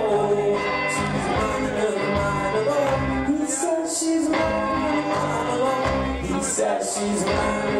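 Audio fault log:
1.07, 5.40, 6.51 and 7.24 s, bit error spike: four isolated ticks, three peaking near about -17 dBFS and the one at 5.40 s at about -23 dBFS. A flipped bit pushed one sample, or three in a row at 1.07 s, up by a power of two before it snapped straight back, so each tick is broadband and unrelated to the surrounding sound. An edit or dropout click instead leaves a lasting step or gap in the waveform.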